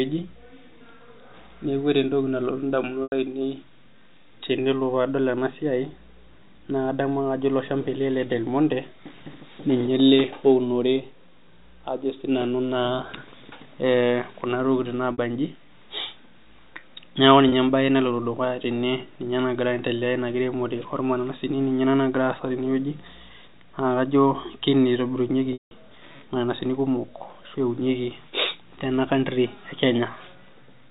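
Brief buzzy holds interrupt the speech at 3.03–3.12 s, 15.12–15.18 s and 17.49–17.52 s. At 25.53–25.71 s a longer one fades to silence before a cross-fade back. This is packet loss with pitch repetition: lost packets are bridged by repeating the last pitch period.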